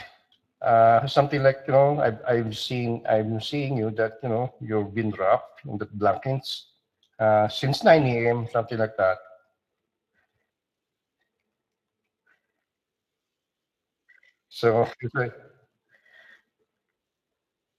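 From start to finish the speech carries Speex codec damage, and it is plainly audible. The sound points to a mid-rate setting of roughly 22 kbps. With too few bits for the excitation, the speech comes out grainy and hoarse. Highs stop sharply at 15.2 kHz, and the upper band sounds like shaped hiss instead of real detail. That noise-filled top and the rough CELP texture set it apart from the swirly, warbling artefacts of transform codecs.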